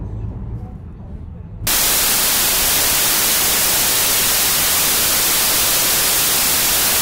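Wrong sample width from 1.67 s to the end: the audio sounds like 32-bit samples read back as 16-bit, so each real sample splits into two mismatched values. Loud noise buries the original sound, which plays at half speed and drops an octave.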